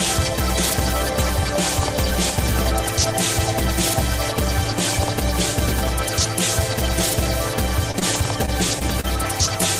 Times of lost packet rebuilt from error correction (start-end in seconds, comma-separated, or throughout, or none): 9.45-9.63